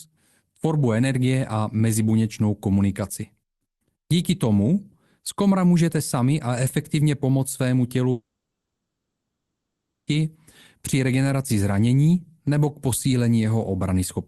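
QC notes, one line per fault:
8.11–10.09 s, long network dropout: about 1.96 s of speech is likely lost; the last sound trails off as a fading buzz, then about 1.29 s of near-silence, and speech resumes with that part missing rather than delayed.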